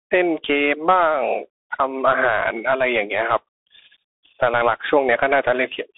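A speech clip carried throughout by a Bluetooth CVSD headset codec. The band runs from about 250 Hz to 3.5 kHz, with nothing above 3.8 kHz. The one-bit delta coding, which fits a 64 kbps link, audibly lags loud high sounds, scratching the s sounds and leaving granular hiss.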